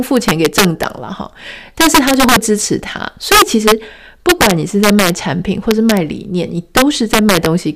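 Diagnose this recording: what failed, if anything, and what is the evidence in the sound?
Integer overflow in a fixed-point gain or sample-format conversion stage. The speech is driven past full scale, by about 5, 6, 3, 4, 0 and 4 dB, at 0.17–0.83, 1.81–2.36, 3.32–3.72, 4.29–5.10, 5.71–5.97 and 6.77–7.46 s. Instead of being limited, each peak over the limit wraps to the opposite sign and jumps across the whole range, so you get harsh cracks far nastier than clipping.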